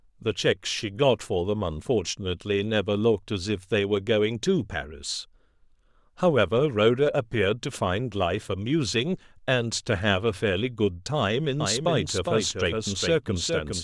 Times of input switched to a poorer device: none

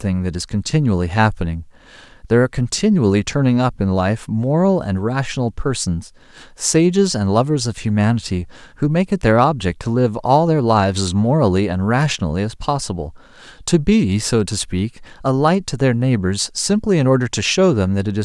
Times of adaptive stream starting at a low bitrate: none

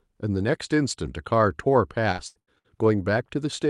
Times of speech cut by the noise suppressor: none

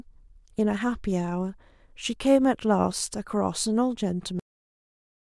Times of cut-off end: 4.39-5.32

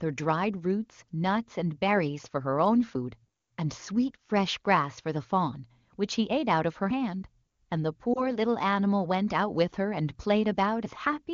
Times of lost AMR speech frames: 8.13-8.27

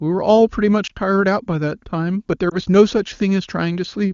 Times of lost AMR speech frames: 0.87-0.92, 2.49-2.56

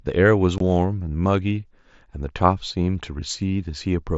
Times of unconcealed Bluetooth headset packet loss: 0.58-0.61

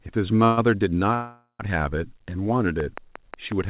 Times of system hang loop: none

